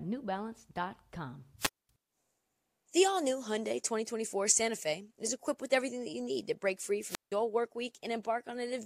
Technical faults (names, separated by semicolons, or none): wireless microphone squelch dropout